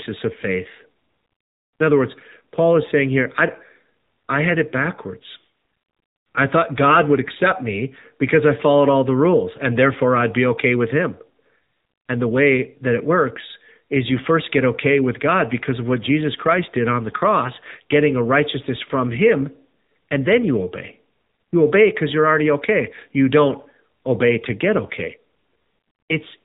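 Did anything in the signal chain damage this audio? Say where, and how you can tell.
Yes: the AMR narrowband mobile codec, throughout the speech, cuts everything above 4 kHz and adds a buzzy synthetic edge, which fits about 7.4 kbps, not simple low-pass filtering.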